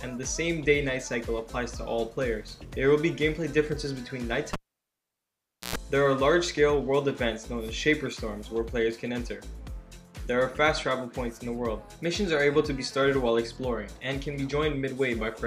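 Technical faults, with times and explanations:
4.53–5.76 s: cable pulled and plugged in. A pop at 4.53 s starts about 1.18 s of near silence. Within it, 0.11 s of 60 Hz mains buzz comes while only the plug tip touches, ungrounded and picking up hum. A second pop comes as the signal returns at 5.76 s.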